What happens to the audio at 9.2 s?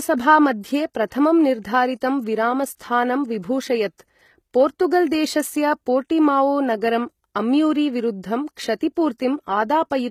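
A short hiss smears in just ahead of a sharp attack at about 9.18 s, softening its onset. This is pre-echo: the codec spreads quantisation noise across a whole transform block, so noise sized for the loud attack leaks into the quiet 17 ms before it.

Throughout this moment the treble also sounds gritty and synthetic, with sibilants lispy and metallic and nothing above 14.9 kHz. The likely cause is HE-AAC compression at a low bitrate, around 20 kbps, rebuilding the high band by copying lower harmonics upward.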